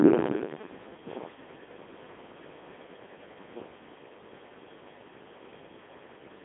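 Throughout, the speech has passed through a Codec 2 vocoder, which sends only pitch, voicing, energy and spectral shape and rebuilds sound from sine waves. It is heavily robotic and buzzy, fitting a 2.4 kbit/s mode. A spectrogram shows synthetic harmonics between 200 Hz and 3.6 kHz, and nothing above 3.8 kHz.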